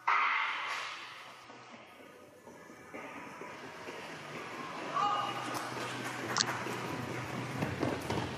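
Damaged data in a compressed stream shows up at 1.44 s and again from 6.37 to 6.43 s. At both points part of the encoded data has been corrupted, so the decoder cannot read the affected frames properly, loses its place and has to hunt for the next valid frame header before playback settles again. The first is a very brief blip of about 10 ms; the second lasts about 60 ms and comes across as a chirp, squawk, click or short hole cutting into the sound.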